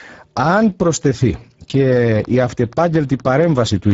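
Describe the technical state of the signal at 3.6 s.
At 3.6 s, two faults overlap. The first is Speex codec damage, present through the whole clip. This CELP coder has few bits to rebuild the excitation, so the speech sounds hoarse and grainy. The damage is plainly audible, which points to a low setting near 10 kbps. Nothing reaches above 7.7 kHz. The top band sounds like a shaped hiss rather than real detail.

The second is a train of clicks running from 2.25 s to 3.92 s. At 3.6 s it is well underway. Pulses of the same shape arrive at a steady 4.2 per second, about seven in all. Each stands out roughly 10 dB above the speech. They are heard as a regular ticking laid over the sound, including the gaps. The likely cause is interference from nearby equipment or a faulty connection or power supply.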